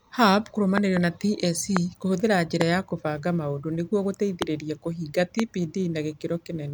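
Loud pops occur at 0.78 to 0.99 s (two in quick succession), 1.77 s, 2.61 s (just before "ya kũbanga maũndũ nĩguo"), 4.42 s (just after it) and 5.40 s. Each is a sharp click-thump about 20 dB above the speech, which carries on underneath. They are likely voltage spikes from a switch, static or a driver glitch.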